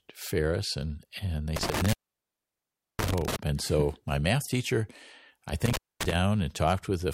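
Intermittent contact between 1.56 and 3.36 s, and again between 5.66 and 6.12 s: a loose plug or cable momentarily opens the signal path, so the speech drops out for about 1.06 s and then about 235 ms, with crackle at each break and reconnection.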